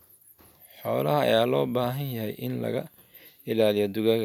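No technical faults are audible.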